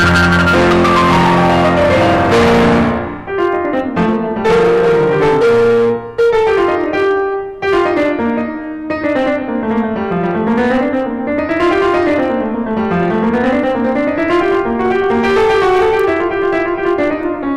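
A harsh, fuzzy distortion sits on every loud moment of this music from start to finish, the sound of hard clipping: the signal is driven about 18 dB past what the stage can pass, so roughly a sixth of the waveform is sliced flat, spraying high harmonics.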